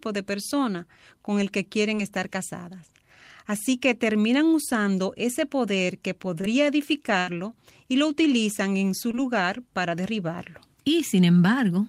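At 1.95 to 1.99 s, 6.41 to 6.45 s (just after "usando ese poder que") and 9.11 to 9.15 s (between "lo utilizan en su" and "para derribarlo"), the speech has short concealed packet loss. About 20 ms of audio never arrived, and the receiver filled the hole by extending the preceding sound before blending back. Each is heard as a brief smear or wobble. On a spectrogram, the harmonics or noise run on unnaturally smooth for an instant. The waveform shows a repeated cycle or smooth noise where the real detail should be.

At 7.19 to 7.29 s, just before "y lo utilizan en", a burst of packet loss removes about 80 ms. The decoder stretches the last sound to cover it and fades it out as the gap continues, so the speech turns into a short held buzz or fading hiss and then jumps ahead with that stretch missing. A spectrogram shows frozen, decaying bands ending in an abrupt restart. The waveform shows a tapering envelope.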